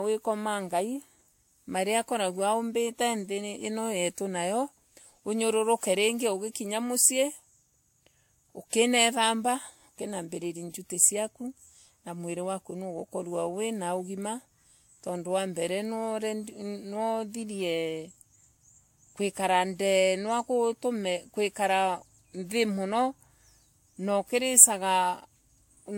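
Across the whole speech clip, the audio has likely been through transcoding between lossy codecs, a low-rate Vorbis-like encode followed by a WMA one, each adding its own artefacts to the last. Nothing remains above 16.6 kHz, and the two codecs' different artefacts are heard together.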